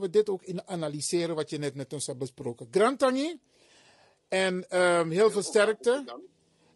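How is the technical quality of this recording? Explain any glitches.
The technical quality is limited by one fault that runs through the whole speech recording: low-delay AAC compression, heard from start to finish. The voice sounds rough and grainy, with a noisy fill between the harmonics and a top band that sounds thin and artificial. The likely cause is an AAC-ELD encoder of the kind used in video calls. Its very short frames cannot separate closely spaced pitch harmonics well, and at a rate that fits about 32 kbps too few bits remain to keep the upper range clean.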